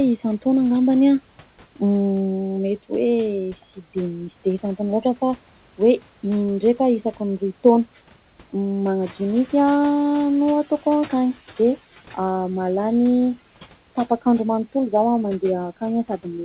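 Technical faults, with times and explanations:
9.01–11.77 s, noise suppressor catching up: the background noise jumps by about 10 dB around 9 s, and the suppressor's noise estimate takes 2.76 s to follow, so the noise comes through with less reduction at first, then settles about 12 dB lower once it adapts.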